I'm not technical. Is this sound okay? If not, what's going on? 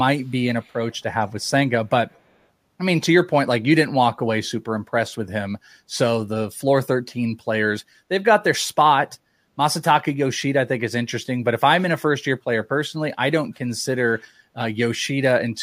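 No. There is an echo leak. A faint, delayed copy of the speech comes back about a quarter-second late. It happens from 0.6 to 0.96 seconds, around 1.41 to 1.48, and from 2.1 to 2.35. It likely comes from a speakerphone whose echo cancelling let some sound through.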